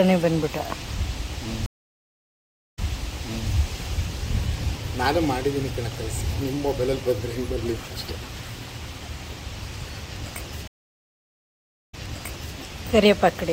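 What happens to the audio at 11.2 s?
A stream reconnect runs from 10.68 to 12.57 s. The connection dropped, leaving about 1.24 s of silence, then a fresh decoder restarted mid-stream, so the audio resumes roughly 0.65 s earlier than where it cut off and fades back in.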